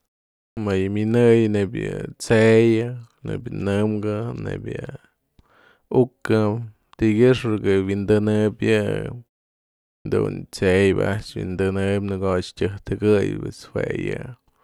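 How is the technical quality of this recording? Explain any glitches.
Two onsets are cut short. Both are clipped starts after a pause, at 0.53 to 0.57 s and 10.01 to 10.05 s. Each follows silence, of about 0.5 s and 0.8 s. The output device drops into sleep during quiet and needs time to lock again. About 40 ms of sound is lost each time. Speech therefore begins abruptly, missing its first sounds.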